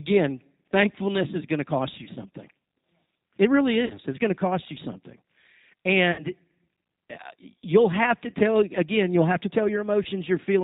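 The whole recording has G.729 codec coloring: 8 kbit/s pulse-based rebuilding cuts everything above 4 kHz and leaves the speech rough and slightly synthetic. VoIP packet loss concealed by the speech codec occurs at 2.04–2.09, 3.86–3.96, 6.12–6.24, 8.30–8.34 and 10.03–10.07 s, filling gaps of 20, 40, 60, 20 and 20 ms with a fading extrapolation that stays weak briefly afterward.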